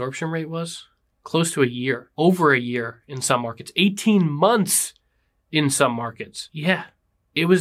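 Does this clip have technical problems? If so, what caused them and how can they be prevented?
No, this clip has no technical problems, so there is nothing to trace to a cause or to prevent.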